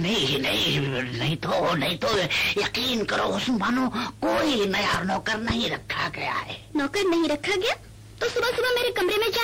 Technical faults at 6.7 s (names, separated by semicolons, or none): none